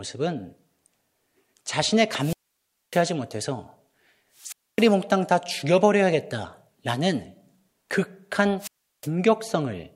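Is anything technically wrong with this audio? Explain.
Yes, there are three wireless microphone squelch dropouts: 2.15 to 3.06 s, 4.36 to 4.93 s and 8.59 to 9.09 s. Each time the FM mic's radio signal fades, hiss swells, and the receiver's squelch mutes the output, leaving holes of roughly 0.6, 0.26 and 0.36 s before the speech returns.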